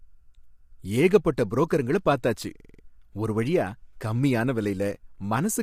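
From start to finish the speech sounds rough and grainy, with a hiss-like noise filling the gaps between the pitch harmonics and a top band that sounds thin and synthetic. This is likely low-delay AAC compression of the AAC-ELD kind used in video calls, at a bitrate that seems to be around 32 kbps. Its short frames of about 10 ms can't resolve the voice's harmonics finely, and at this low bitrate bits run short, so the damage is plainly audible.

At 2.60 s, right after "ஏகப்பட்ட புரோக்கருங்கள பார்த்தாச்சு", the sound catches on one tiny fragment and repeats it five times until 2.83 s, giving a brief machine-gun stutter at 21.5 Hz. This is a system hang loop. The computer or driver stalled while the sound hardware kept replaying the same 46.44 ms stretch of its ring buffer, which fits a 2048-sample buffer. Speech resumes with "ஒரு வழியா கம்மியான விலையில", with little or nothing lost.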